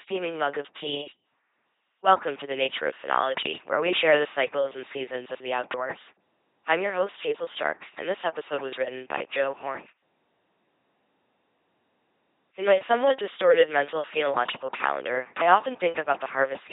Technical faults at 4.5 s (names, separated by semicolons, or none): LPC-10 vocoder